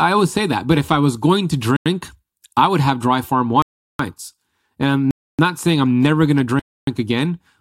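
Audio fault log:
1.77 to 1.86 s, 3.62 to 3.99 s, 5.11 to 5.39 s and 6.60 to 6.87 s: block of digital silence. The speech drops to silence four times, for about 93 ms, 372 ms, 279 ms and 279 ms, which fits whole output buffers of 4096 and 16384 samples going unfilled. Each hole starts and ends abruptly because the waveform is cut with no fade. The audio isn't muffled and the noise floor doesn't dip; each gap is total silence with abrupt edges.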